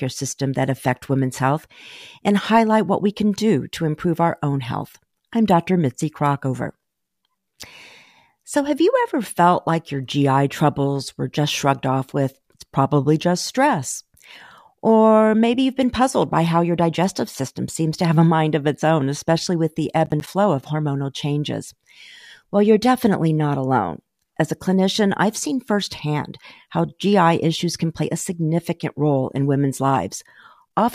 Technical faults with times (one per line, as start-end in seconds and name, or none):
20.06-20.27 processor overload crackle